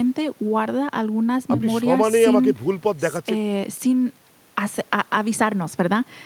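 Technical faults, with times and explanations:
No technical faults detected.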